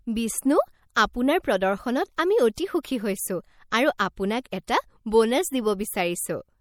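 Speech with plainly audible MP3 compression throughout: a watery, swirling quality where weak frequency components flicker on and off between frames, with nothing above 20.5 kHz. This is likely a low-bitrate encode, consistent with about 64 kbps, and the flickering detail sets it apart from steady broadband noise. Pre-echo precedes six attacks, at 2.16, 2.55 to 2.58, 2.83, 3.98, 4.44 and 4.67 s, spreading 14 to 21 ms. A brief hiss arrives just before each onset, which then sounds soft or smeared, unlike a click, which sits on the attack itself.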